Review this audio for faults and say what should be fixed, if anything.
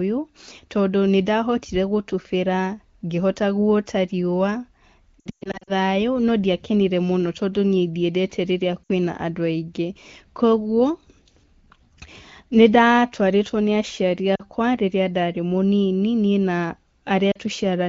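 Lost AMR speech frames at 5.20–5.72 s (300 ms lost, scattered, longest run 120 ms), 8.83–8.90 s, 14.35–14.42 s after "nĩndatwarĩtwo nĩ aciari", and 17.32–17.37 s: the decoder repeats the last good pitch with fading gain, showing as smeared, flattened harmonics and a sagging waveform envelope. Stronger channel error protection or better radio coverage would prevent it.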